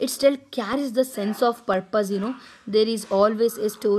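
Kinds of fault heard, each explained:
Periodic USB or driver dropouts: Something in the system stalls the USB transfer or audio driver on a fixed schedule, so a sliver of the speech never arrives and silence fills the gap. Here the stall recurs every 0.5 s from about 0.23 s to 2.24 s, giving around five brief holes of roughly a millisecond each. Each hole breaks the waveform abruptly, so the speech carries an evenly spaced tick at that half-second rhythm.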